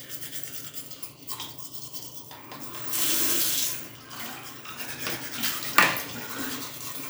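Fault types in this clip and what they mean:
No fault types are present in this clip.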